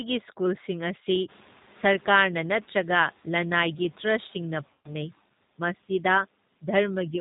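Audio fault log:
throughout: G.729 codec. The speech arrives through an 8 kbit/s codec that rebuilds each 10 ms frame from a vocal tract filter, a pitch predictor and a few pulses, so nothing above 4 kHz survives and the voice has a plainly audible rough, synthetic edge. A plain low-pass filter would dull the sound cleanly. Here the grain and buzz come from the sparse pulse model. The room noise that rises about 23 dB around a second and a half in warbles through the same model.
4.73 to 4.91 s: VoIP packet loss concealed by the speech codec. About 120 ms of audio went missing, which fits six lost 20 ms packets. The decoder filled the gap by repeating its last pitch and filter with shrinking gain, so the speech turns into a buzzy tone or coloured noise that fades rather than dropping to silence or clicking the way a plain dropout would. Because each frame builds on the previous one, the voice stays weak and distorted for a short while after the stream returns, which is why the damage runs past the gap itself.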